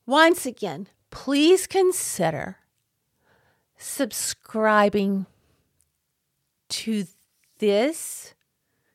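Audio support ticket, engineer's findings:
Engineer's findings: no audio fault found in this speech clip.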